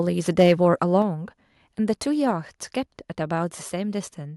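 From 0.38 to 0.53 s the loudest syllables turn harsh and crackly, with peaks pushed about 5 dB past full scale and a small share of samples flattened. This is microphone overload, likely from an input level set too high. Unlike codec distortion, it tracks the loudness peaks exactly.

At 1.02 s the microphone volume is stepped down: voice and background together drop by about 4 dB in one instant step, likely the call software cutting input gain after that clipped burst. A fade or automatic gain control would glide rather than jump.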